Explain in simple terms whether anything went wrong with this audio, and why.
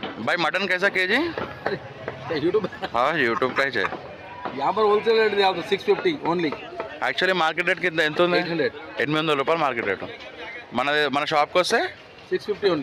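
Nothing went wrong here.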